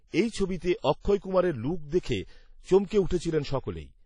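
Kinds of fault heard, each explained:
WMA compression: The speech has plainly audible codec damage throughout, with a ringing, washy quality and hiss that rises and falls with the signal, likely from a Windows Media Audio transform encoder at a low bitrate, roughly what a 32 kbps stream would give. Long transform blocks spread quantisation noise over tens of milliseconds around each sound. On a spectrogram, nothing appears above 10.1 kHz, and weak components are missing in patches where they were zeroed.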